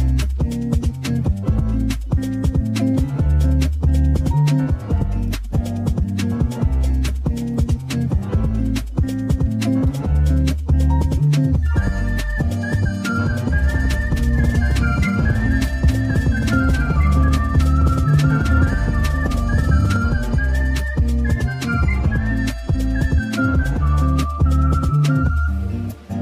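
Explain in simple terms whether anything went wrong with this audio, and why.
From 13.46 to 19.96 s there's a doubled audio track: a slightly quieter copy trails about two seconds behind, likely from a second capture path. Unlike an echo, it never fades and starts and stops abruptly.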